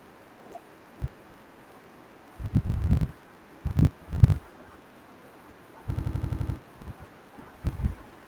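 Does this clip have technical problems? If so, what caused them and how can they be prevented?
Yes. Throughout there's a block size mismatch (truncated): each block's tail gets dropped, giving a 50 Hz buzz and audio running about 1.07 times fast at roughly normal pitch, which fits 1024-sample writes. Make both stages agree on block size.

From 5.97 to 6.57 s there's a system hang loop: the system froze while the hardware replayed one 85 ms chunk seven times, a 11.7 Hz stutter that fits a 4096-sample ring buffer, with practically nothing lost. Keep drivers stable and have the audio path mute on a stall instead of looping.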